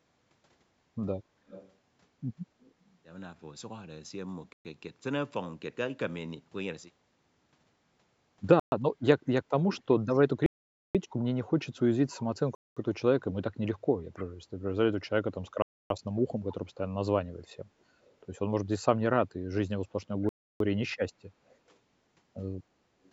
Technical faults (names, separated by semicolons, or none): echo leak; Bluetooth stall